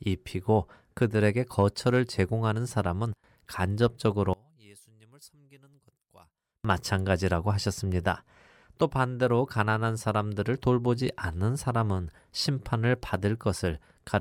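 One channel inverted, likely a polarity flip on one side of the stereo pair, affects this speech recording from 4.33 to 6.65 s. When the two channels are summed, the centred voice cancels and the level falls by about 29 dB, leaving only a faint residue.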